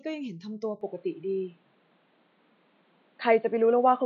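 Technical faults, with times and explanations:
0.81 s to the end, input switched to a poorer device: At 0.81 s the speech abruptly turns dull and boxy. Nothing above 4.6 kHz survives from that point, so the crisp consonant detail vanishes. The level changes by about 5 dB, and a faint new background noise appears, about 40 dB under the speech. There is no gap at the change. This likely means the recording moved onto another microphone or a headset's call mode, whose narrower band and different noise take over.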